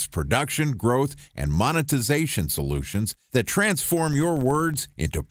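Right after "and monetization solutions that", from 3.99 to 4.82 s, the speech picks up a low buzz at about 21.5 Hz. That's a filter restarted on every block: it drops its memory at each block boundary and starts again from silence, so each block opens with a small click. Those clicks come fast enough to fuse into a buzz whose rate fits a 2048-sample block, and it rises and falls with the speech level. Underneath, the Opus compression leaves only light traces.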